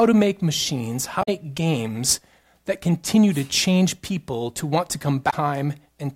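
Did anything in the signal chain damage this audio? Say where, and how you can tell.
Yes. At the codec or storage stage, the compressed stream carries damaged data in two places: from 1.19 to 1.29 s, just after "to make machines" and before "games that continue to", and from 5.27 to 5.34 s, after "people to want to". Each is a brief disruption of roughly 70 to 100 ms. Corrupted bytes there made the decoder misread those frames and lose sync, so the speech breaks up until it finds the next valid frame header.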